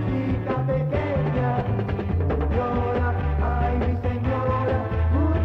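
At 1.60 to 1.62 s, compressed frames are skipped: about five frames of roughly 23.2 ms each go missing, so the audio jumps ahead by around a tenth of a second. Unlike a dropout, there is no silent gap.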